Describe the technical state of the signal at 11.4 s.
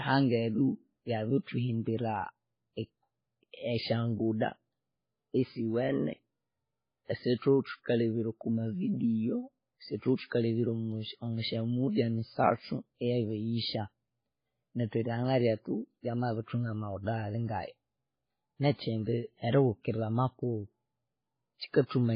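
At 11.4 s the speech carries the same degradation heard across the whole clip, most likely from transcoding between lossy codecs. Nothing is present above 5 kHz, so the sound is dull and band-limited. Swirly, smeared artefacts typical of a very low-rate MP3 pass sit alongside a second layer of AAC-LC coding noise. The later encoder has spent its limited bits re-coding the earlier damage, so both sets of artefacts are heard together.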